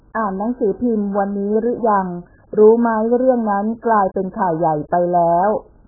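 From start to finish, the speech sounds heavily compressed. Nothing is heard above 1.7 kHz, so the sound is dull and muffled. Consonants lose their edges. Sibilants turn fizzy and smeared. Sustained sounds warble. The likely cause is AAC compression, here AAC-LC. At a very low bitrate, around 8 kbps, the encoder drops the top of the spectrum. It coarsely quantises what remains, leaving gaps and noisy bands.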